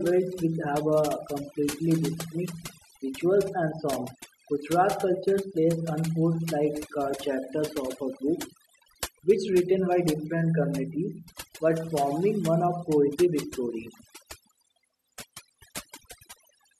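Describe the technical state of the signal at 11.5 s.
At 11.5 s the speech is under overdone noise removal, which runs throughout the clip rather than starting or stopping there. A noise reduction stage was pushed too hard, so it pulls individual frequency bands far down or out whenever they sit close to its estimate of the noise, taking quieter parts of the voice with them. The background drops and breaks up into twinkling specks.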